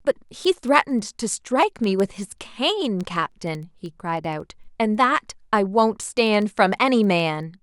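From 0.14 to 7.58 s, an unlocked receiving clock, a few hundred ppm off, slips one sample repeatedly, causing word clock ticks: sharp, uneven clicks roughly fourteen times a second.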